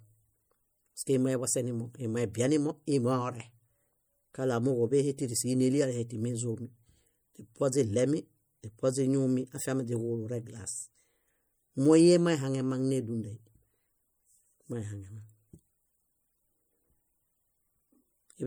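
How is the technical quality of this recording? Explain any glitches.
The quality is compromised throughout: plainly audible codec damage runs the whole length, and nothing appears above 21.1 kHz. The likely cause is MP3 compression at a bitrate that sounds around 64 kbps, where weak frequency components get dropped and flicker frame to frame.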